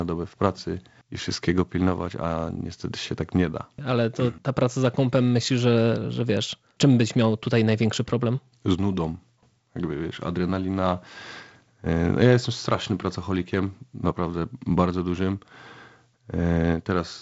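Nothing technically wrong can be heard in this speech recording. It comes through G.722 wideband telephone coding, with nothing above about 7.7 kHz and a light coding hiss that suggests the codec's lower 48 kbit/s mode.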